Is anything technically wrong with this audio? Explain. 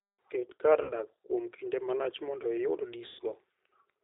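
Yes. Two faults can be heard.

The whole clip is coded with the G.729 codec at 8 kbit/s. It rebuilds speech from a vocal tract filter, a pitch predictor and a few pulses per frame. Nothing above 4 kHz survives. The speech sounds plainly rough and synthetic.

There is also VoIP packet loss concealed by the speech codec, at 0.83 to 0.92 s, just before "dak kuom kinde malach", and at 3.07 to 3.22 s. About 60 ms and then 120 ms of audio are missing. This fits three and then six 20 ms packets. The decoder extends its last pitch and filter at falling gain. Each gap becomes a fading buzzy tone or coloured noise, and the speech stays weak briefly afterwards.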